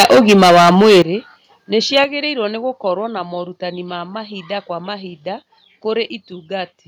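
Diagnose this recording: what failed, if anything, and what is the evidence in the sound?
Microphone overload, at the converter stage, is audible from 0.0 to 1.02 s as a harsh, crackling edge on the loudest speech, with peaks about 15 dB beyond full scale and roughly a fifth of samples flattened. A brief repeat at 1.96 to 1.99 s, just before "nĩ gũkorwo na morutani", is milder, about 3 dB over. On a waveform the peaks sit as flat plateaus; a spectrogram shows smeared broadband energy above the speech harmonics. The likely cause is input gain set too high for the converter.

A microphone volume step-down, in call processing, follows each distorted stretch: speech and background together drop at once by about 11 dB at 1.02 s and by about 6 dB at 2.04 s, the second just before "nĩ gũkorwo na morutani". The waveform envelope shrinks abruptly rather than fading, and the spectrogram darkens evenly across all frequencies, including the noise floor. 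This is likely the call software's automatic gain control reacting to the clipping by lowering the device input volume in discrete steps.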